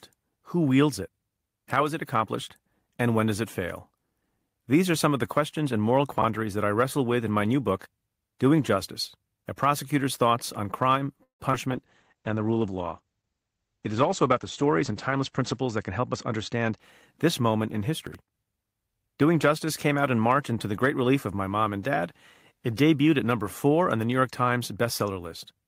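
A speech recording with several transport and codec faults. At 6.18 to 6.24 s a 20 ms chunk arrived two chunks late and plays after the audio that should follow it, so chunks out of order leaves a brief jumbled moment. The same fault returns at 18.07 to 18.15 s, where a 20 ms chunk lands three chunks late and produces another garbled instant. Around 11.23 to 11.43 s the audio stalls in a call audio freeze, likely because packets were held up and the jitter buffer ran dry. The last sound is stretched into a fading buzz for about 160 ms, including roughly 120 ms of silence, and then resumes where it stopped, so a gap is inserted without losing content. Right after, at 11.52 to 11.55 s, 40 ms of audio never reached the decoder, and short concealed packet loss patches the hole with continued sound as the delay shrinks by around 30 ms, heard as a quick smear or wobble. From 11.72 to 16.87 s the bandwidth estimate fell and the encoder dropped from 40 to 11 kbps, staying at the lowest rate for about 3.9 s. 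In this call bitrate drop the audio band narrows from 20 kHz to 8 kHz, so the speech turns muffled, rough and watery. Inside that stretch, from 14.63 to 16.71 s, the jitter buffer held surplus audio and trimmed short pitch-period pieces, roughly 150 ms in total. That jitter buffer speed-up makes the speech run at about 106% speed at unchanged pitch, so it sounds hurried.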